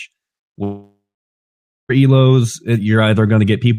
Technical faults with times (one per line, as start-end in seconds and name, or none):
0.63-1.91 long network dropout